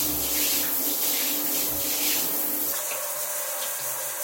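Audio read two samples at a time (double speed) starts at 2.73 s and lasts to the end of the clip. From that point the reader treats each pair of samples as a single frame, as though the stream held two channels or samples twice as wide. Everything plays back at 2x speed and jumps 12 semitones, a full octave up.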